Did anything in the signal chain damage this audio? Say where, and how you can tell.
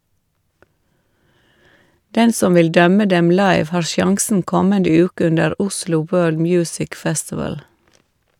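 No, nothing in this speech recording stood out on listening as a sign of damage anywhere along the chain.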